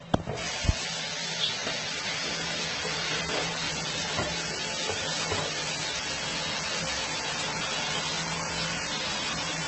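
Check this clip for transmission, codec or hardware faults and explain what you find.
There's one problem, and it runs through the whole clip: the audio has likely been through transcoding between lossy codecs. Nothing comes through above 8.2 kHz, so everything sounds dull and boxed-in from start to finish. Layered on that you get more than one flavour of damage at once: smeared, warbly transients alongside a watery, swirly texture. That mix fits a chain where each low-bitrate encoder, plausibly ending in Opus, wasted its bits re-coding the previous stage's artefacts while adding its own.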